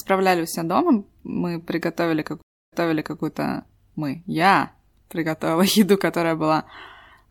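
A stream reconnect occurs from 2.42 to 3.21 s, right after "все дома мы приготовили": the connection dropped, leaving about 0.3 s of silence, then a fresh decoder resumed the speech roughly half a second earlier, so a stretch repeats and restarts with a muted or faded onset.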